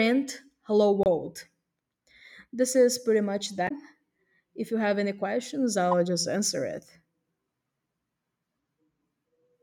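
At 1.03 to 1.07 s, again at 3.65 to 3.71 s, and once more at 5.91 s, the speech is broken by brief glitches caused by damaged data in the compressed stream. Corrupted bytes make the decoder misread those frames and lose sync until it locks onto the next valid frame header.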